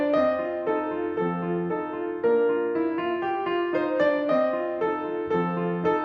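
A short music clip with nothing technically wrong to report.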